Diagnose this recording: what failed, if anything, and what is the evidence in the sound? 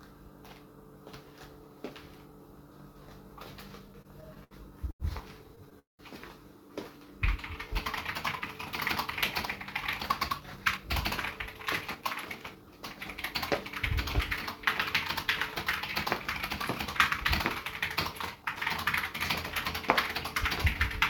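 The network delivery failed: packets arrived late, and the receiver's jitter buffer had to conceal and then rebalance. No audio is lost in the stalls, but the timing of the sound is disturbed between 3.79 and 12.70 s.

Repeated stalls (stutter) occur from 3.79 to 4.54 s, where eight gaps are filled with 157 ms of continued sound. The longest gap is 71 ms, and about 21% of the span is concealed. They occur again from 5.56 to 6.02 s, where four gaps are filled with 232 ms. One of these lasts 198 ms, so half that span is concealed. On a spectrogram these show as flat, frozen stretches, and the long one fades.

A short stall from a late packet occurs from 4.91 to 5.03 s. One sound is held for 88 ms while the buffer waits, and the delay grows by 88 ms. A waveform shows a repeated cycle with a slight dip, and the spectrogram shows a briefly frozen column before the sound resumes where it left off.

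A jitter buffer slow-down runs from 7.05 to 7.74 s at 94% speed, adding 47 ms by repeating single periods to rebuild the reserve. Pitch is unchanged but events stretch. On a spectrogram the features widen horizontally and their frequencies stay the same.

A jitter buffer speed-up follows as the surplus is drained. It runs from 10.40 to 10.85 s at 109%, removing about 50 ms, and from 11.31 to 12.70 s at 111%, removing about 150 ms. The sound is hurried but not raised in pitch. Spectrogram events compress in time, and the waveform has small splices.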